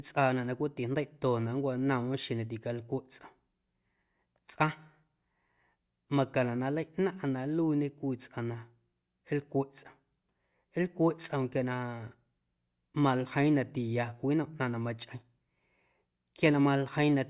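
No technical faults can be heard in this recording.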